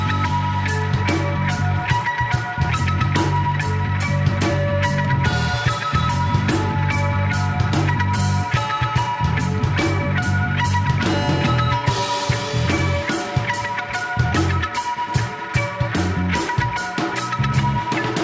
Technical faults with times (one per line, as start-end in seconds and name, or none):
none